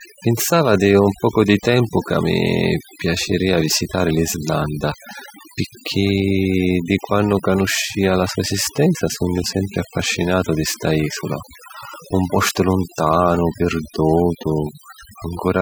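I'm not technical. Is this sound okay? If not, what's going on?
No. The whole clip, from start to finish, has overdone noise removal. Someone ran a noise-cleaning tool on a noisy recording and set it far too strong. The tool shuts off any slice of the sound that seems close to the background hiss. The quietest parts of the speech get shut off too. So the background drops and breaks up into twinkling, warbling specks.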